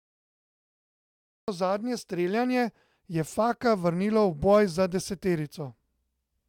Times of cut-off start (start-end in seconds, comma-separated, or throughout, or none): 0.00-1.48